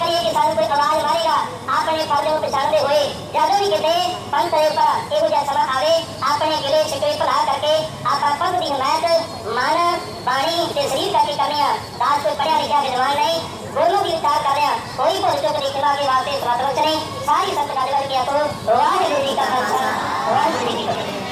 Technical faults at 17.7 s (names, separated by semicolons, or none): wrong sample rate